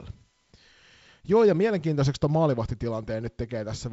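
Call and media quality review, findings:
No faults found in this speech: the signal shows the normal character of G.722 wideband telephone coding, with no content above about 7.7 kHz and a light hiss and slight graininess that fit the 48 kbit/s mode.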